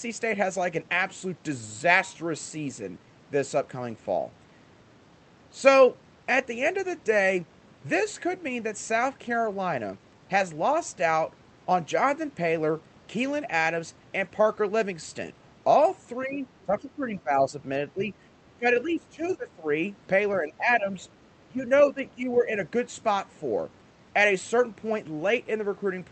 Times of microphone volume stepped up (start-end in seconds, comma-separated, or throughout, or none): none